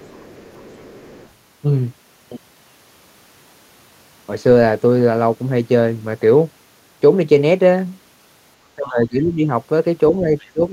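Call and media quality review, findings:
Other side's voice leaking through: faint second voice at 0.0–1.3 s and 10.39–10.49 s, roughly 30 and 35 dB under the talker. Likely residual echo: the far side's audio playing on the talker's loudspeaker is reaching the microphone and the echo canceller is not fully removing it.

Speech suppressed in double talk: talker level dips by about 15 dB at 8.75–9.46 s and by about 20 dB from 10.53 s to the end. Likely echo canceller confusing near-end speech with echo during overlap and attenuating both.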